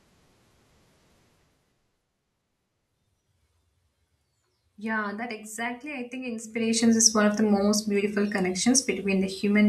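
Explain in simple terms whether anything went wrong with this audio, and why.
Zipper noise appears from 6.42 to 6.82 s, just after "that exactly I think" and before "is one of the". The volume changes in dozens of tiny jumps each second instead of gliding, so each jump ticks, giving a brief zipping rasp rather than the silent glide of a smooth fade.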